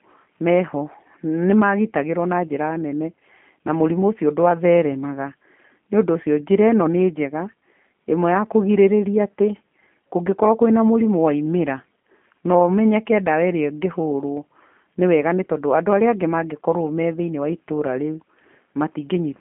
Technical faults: G.729 codec

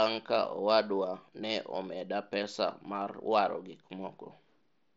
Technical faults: none

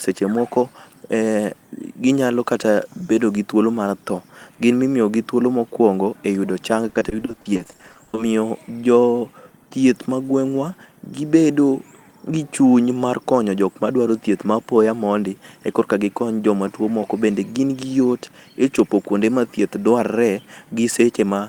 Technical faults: repeated packet loss (robotic sound); hard clipping

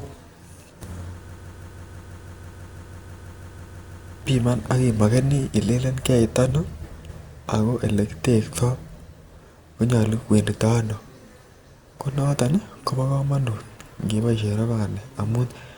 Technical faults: broken-record loop

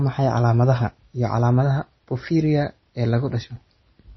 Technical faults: MP3 compression

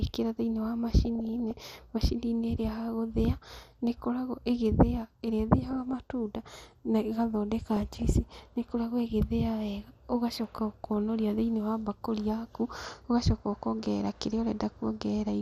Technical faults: MP2 compression; DAB burbling

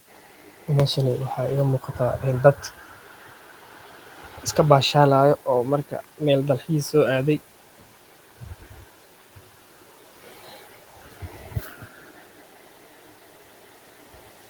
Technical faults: speech cut by the noise suppressor

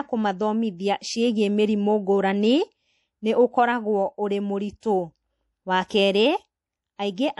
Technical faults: MP3 compression; pre-echo

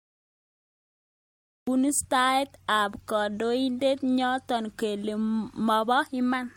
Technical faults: generation loss; cut-off start

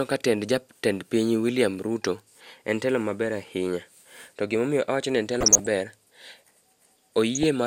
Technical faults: DAB burbling

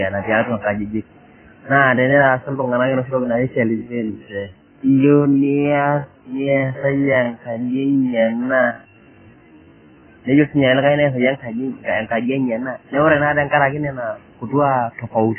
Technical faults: AAC compression; time-stretched section

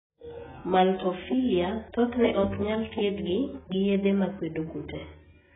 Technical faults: AAC compression

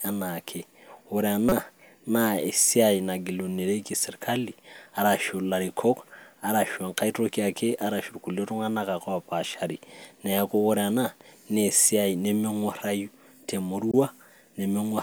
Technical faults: corrupt frame decoded

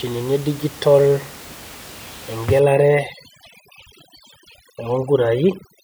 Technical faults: overdone noise removal

